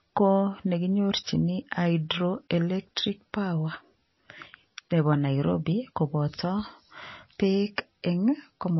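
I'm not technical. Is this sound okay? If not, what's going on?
No. Throughout the speech there is audible damage, most likely from heavy MP3 compression. Everything above about 5.8 kHz is cut away, so it sounds dull and muffled, and faint detail flickers on and off, giving a watery, swirly texture with smeared consonants.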